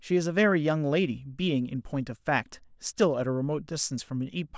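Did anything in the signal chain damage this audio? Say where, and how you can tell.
No, nothing in the signal chain damaged this speech recording. No stage, from capture through to playback, has left any trace that can be heard.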